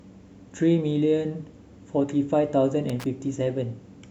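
At about 2.89 s there's a short burst of loose connector crackle, running to roughly 3.06 s. A worn or dirty contact is making and breaking as it shifts, chopping the speech, so you get that irregular scratchy rasp.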